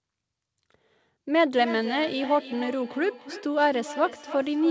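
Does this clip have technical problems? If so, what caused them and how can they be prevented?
Yes. From 1.56 s to the end of the clip there is feedback echo between two devices: a second device in the same room plays back what the first device's microphone sent, and that microphone picks it up again. The echo canceller only removes its own device's playback, so each stretch of speech returns at roughly 300 ms intervals, thinner and more ringing, peaking at about 14 dB below the speech. To prevent it, mute the microphone and speaker on all but one device in the room.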